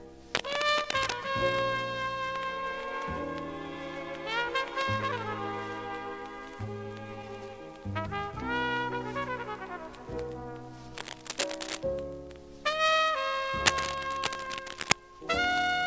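A worn cable, connector or control being moved, with its contact resistance jumping about, is the likely cause of three bursts of cable scratch noise: from 0.34 to 1.13 s, 10.97 to 11.84 s, and 13.65 to 14.96 s. Each adds dense, uneven crackle that scratches and rustles over the sound, about as loud as the signal in the first two and somewhat louder in the last. Throughout, nothing reaches above 8 kHz, which fits a wideband call codec such as G.722.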